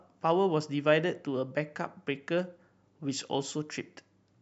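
Nothing in the speech reveals any technical faults.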